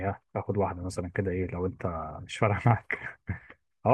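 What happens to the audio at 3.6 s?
Nothing goes wrong at 3.6 s; the speech carries on intact through that moment, with no dropout, click or distortion.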